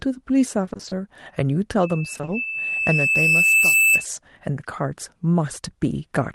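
From 0.65 to 0.93 s the speech breaks up with repeated packet loss, giving a robotic sound. Short holes, none longer than 20 ms (which fits 20 ms packets), are each patched by repeating the preceding sound, so about half of that stretch is concealment. Unlike a plain dropout, the missing pieces are not silent. They come back as stretched-out fragments.

At 1.83 s a loudspeaker feedback squeal begins. The microphone is picking up its own loudspeaker, and at 2.6 kHz the loop gain has gone above one, so that single frequency keeps feeding itself. It swells over about two seconds to roughly 10 dB above the speech and lasts until 4.05 s. A steady interfering whistle would hold one level from the start, but this tone grows out of nothing as the loop reinforces it.

Inside the squeal, from 2.13 to 2.29 s, the same repeated packet loss returns. Again the gaps are 20 ms at most and about half of the span is filled in, so the choppy robotic texture sits underneath the rising tone.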